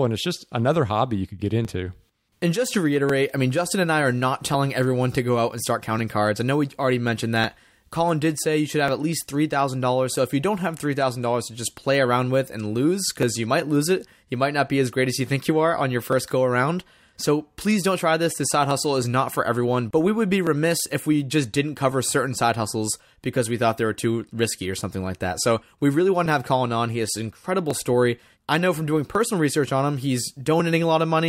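A speech recording with a regular click every 1.45 s from 0.20 s to 30.6 s, about twenty in all, likely clock drift buffer slips: two clocks roughly 700 ppm apart, forcing a skip or repeat of around fifty samples. Waveforms show small discontinuities; spectrograms show evenly spaced thin vertical lines.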